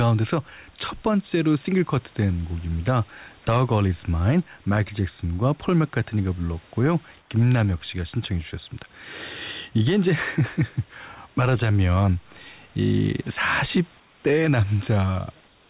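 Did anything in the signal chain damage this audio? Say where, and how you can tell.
Yes, in call processing. At 7.2–7.3 s, 14.0–14.24 s and from 15.46 s to the end, comfort noise replaces the background. On a spectrogram the room's grainy texture becomes a smooth, even band, about 2 to 4 dB lower. The likely cause is discontinuous transmission, with the receiver synthesising shaped noise in the pauses.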